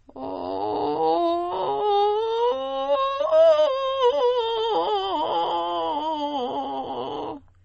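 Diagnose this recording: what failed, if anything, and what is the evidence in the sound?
Across the whole music clip the treble stops abruptly at about 8.3 kHz, and the remaining sound has a plainly audible watery, swirly texture with smeared attacks. The stage is the codec, likely MP3 compression at a starved bitrate, consistent with roughly 32 kbps. Short of bits, the encoder applied a fixed low-pass at that frequency and zeroed weaker spectral lines. Those lines flicker on and off from frame to frame, which produces the swirl.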